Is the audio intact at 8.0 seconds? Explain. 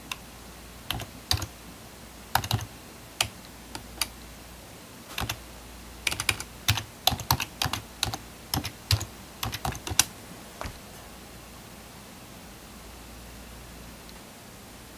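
Yes, at 8.0 seconds the audio plays through cleanly, with no dropout, click, distortion or other fault at that moment.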